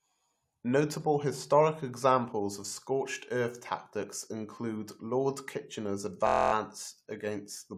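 At 6.27 s the speech locks into a system hang loop until 6.53 s. The driver stalled while the hardware kept replaying one 23.2 ms chunk, which fits a 1024-sample buffer, eleven times over. You hear a flat buzz at about 43 Hz, with almost no audio actually lost.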